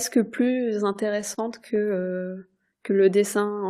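Speech with two playback faults. From 0.93 to 1.39 s there are repeated stalls, a stutter. Packets arrived late, so the jitter buffer ran dry four times. The receiver stretched the last sound over each gap, about 60 ms in all, the longest 31 ms. Nothing is lost, but the speech catches and drags. From 2.77 to 3.55 s a jitter buffer slow-down follows. The receiver was rebuilding its reserve by repeating single pitch periods or bits of pauses. That adds 79 ms, so this stretch plays at 91% speed. The pitch stays the same, but sounds are drawn out.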